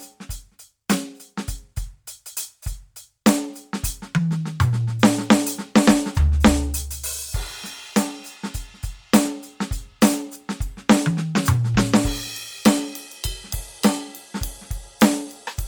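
Bluetooth LC3 compression is likely the cause of the damage heard throughout this music. The upper spectrum turns grainy and breathy where the encoder discarded detail and filled the gaps with noise, consistent with 10 ms frames at around 48 kbps. Nothing sounds above 20.2 kHz.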